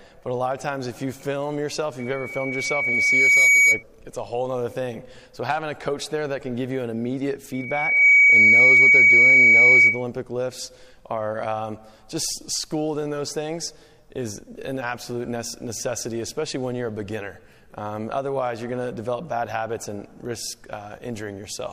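A loudspeaker feedback squeal hits twice, from 1.99 to 3.83 s and from 7.53 to 10.05 s, both at 2.3 kHz. The mic is catching its own speaker, and the loop runs away, swelling over about a second and a half, then half a second, to roughly 15 dB above the sound.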